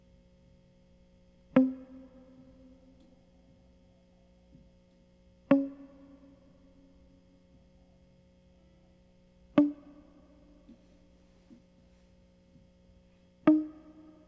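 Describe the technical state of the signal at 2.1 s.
At 2.1 s the music plays through intact, with no dropout, distortion or other audible fault at that point.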